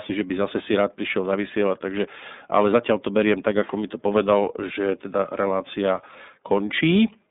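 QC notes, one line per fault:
Throughout: iLBC codec, plainly audible. The speech is confined to a narrow telephone band of roughly 200 Hz to 3.7 kHz, with nothing above 3.8 kHz, so it sounds boxed-in and dull. Each short block's excitation is coded on its own, giving a slightly rough, synthetic edge consistent with 30 ms frames at 13.33 kbps. On a spectrogram, energy stops sharply near 3.8 kHz, leaving the upper band empty.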